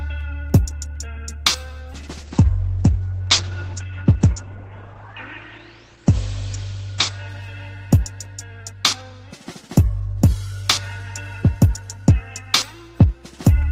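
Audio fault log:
1.94 to 7.85 s, call bitrate drop: the sound turns rough and muffled as the call's bandwidth estimate collapses and the encoder is starved of bits, which fits a fall from around 32 kbps to about 10 kbps, bottoming out for roughly 4.3 s. Coarser coding smears detail, and the audio bandwidth shrinks from 20 kHz to 8 kHz. On a spectrogram, everything above 8 kHz vanishes under a flat ceiling, with blotchy, smeared texture below until the top band returns.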